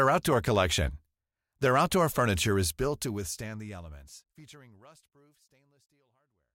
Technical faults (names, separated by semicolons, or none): none